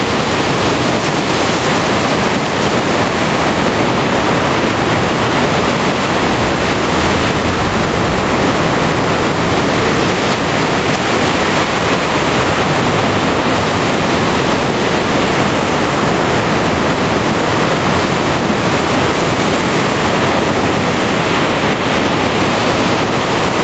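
Nothing stood out on listening to these sounds, which carry the band limit around 8 kHz that comes from passing through a call path.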